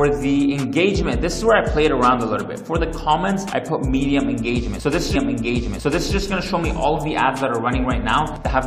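At 5.14 s a stream segment is repeated: the player queued the same chunk of audio twice, so the sound jumps back and replays about one second of material, running until 6.14 s and adding roughly 1.0 s to the programme. A small blip marks the jump back. On a waveform the envelope from just before 5.14 s appears again as an identical copy, and a spectrogram shows the same pattern duplicated side by side, with a thin vertical line at the seam.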